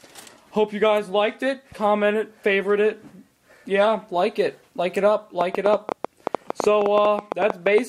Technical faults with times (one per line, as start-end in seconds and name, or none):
5.41-7.79 train of clicks